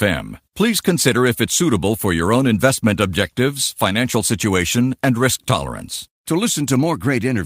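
A speech recording with nothing technically wrong in it. No fault can be heard anywhere in the clip.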